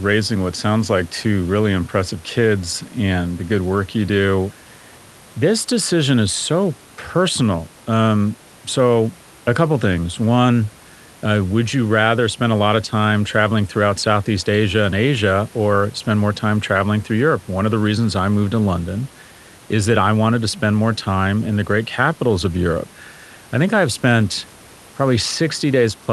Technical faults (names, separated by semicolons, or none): none